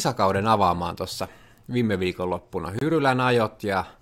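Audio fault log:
2.79–2.81 s, gap between stream segments: the timestamps of two adjoining 2-second segments fail to meet, leaving 25 ms uncovered, and the player fills that hole with silence. The speech cuts out abruptly with hard edges on both sides, then continues with nothing lost, only delayed.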